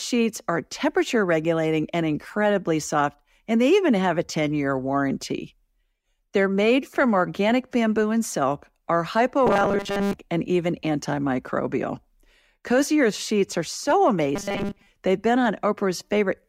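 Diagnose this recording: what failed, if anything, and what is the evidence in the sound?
Robotic sound from repeated short buffers at 9.47–10.13 s, after "bamboo and silk are", and at 14.36–14.87 s, after "sheets are so". A rigid 200 Hz buzz points to a 5 ms chunk replayed, likely a driver buffer underrun.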